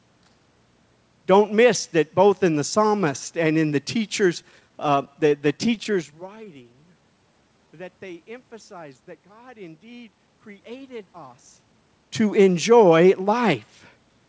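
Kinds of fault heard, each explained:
Repeated stalls (stutter): From 4.42 to 6.93 s playback keeps catching on itself, about thirty brief hitches, none longer than 17 ms, each bridged by continuing the last sound. Some 292 ms is filled but nothing is lost, unlike dropouts, which leave holes.
Jitter buffer slow-down: Between 6.94 and 8.15 s the sound drags to 88% speed as repeated pitch periods add 151 ms. Pitch stays put, unlike a tape slowing down, and the stretch is smooth and continuous rather than broken into stutter-like hitches.
Jitter buffer speed-up: From 10.04 to 11.89 s the audio hurries along at 109% speed because short pitch-period pieces are trimmed out, about a fifth of a second in all. Pitch is unchanged, which separates it from a pitch shift, and it sounds hurried.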